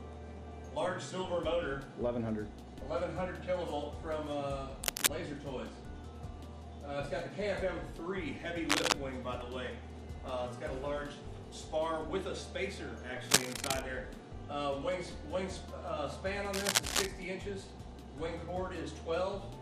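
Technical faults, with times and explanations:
4.8–5.1 s, 8.7–8.9 s, 13.3–13.8 s and 16.5–17.1 s: cable scratch noise. Brief bursts of rough, uneven rustle sit on top of the sound, roughly 5 dB above it, and the 8.7 s one is nearer 10 dB. It's likely a worn cable, connector or pot carrying DC getting moved, with its contact resistance jittering.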